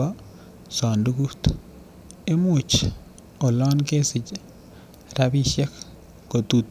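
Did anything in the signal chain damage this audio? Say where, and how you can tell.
No, nothing in the signal chain has audibly damaged this speech recording, and the signal comes across as intact at every stage.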